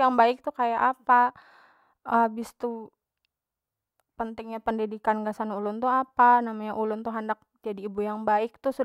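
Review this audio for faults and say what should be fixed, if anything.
Nothing needs fixing, because the speech signal has no audible technical faults.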